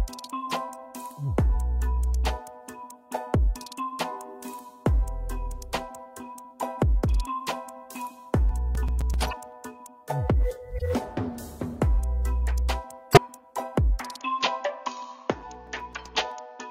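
From 8.49 to 9.52 s there's a run of nine CD scratch ticks, roughly nine a second. A scratch beats the error correction once per revolution, so the player patches a few milliseconds each turn.

Overlapping that, at 9.21 to 9.33 s, a corrupt frame decoded burst spans several frames, where flipped bits sent energy to wrong frequencies. It repeats more quietly at 10.78 s and louder at 13.11 to 13.18 s.

From 14.2 s to the end, the sound abruptly turns duller and a little quieter, with nothing above 6.9 kHz and a faint new noise floor. That's likely an input switched to a poorer device.

Another eight scratch ticks follow from 15.41 to 16.32 s.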